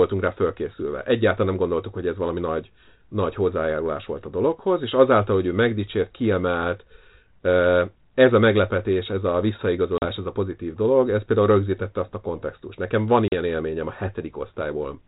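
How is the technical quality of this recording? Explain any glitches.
The speech comes through a narrowband ADPCM telephone path, consistent with G.726 at 32 kbit/s, and has two short breaks from packet loss on an ADPCM call. The first falls at 9.98 to 10.12 s, between "a meglepetés ez a" and "ez a pozitív dolog". The second falls at 13.28 to 13.34 s, just before "élményem a". Each time about 40 ms of sound, roughly a couple of packets, drops to hard-edged silence. The decoder's adaptive predictor and step size then no longer match the sender's, so the speech resumes slightly distorted and settles within tens of milliseconds. That recovery artefact separates it from a clean dropout, which would resume cleanly.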